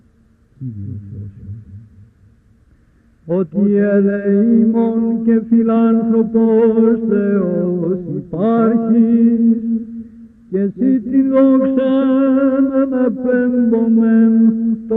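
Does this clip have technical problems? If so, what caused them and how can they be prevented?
No, nothing technical trips it up anywhere along the way, so there's nothing here that needs preventing.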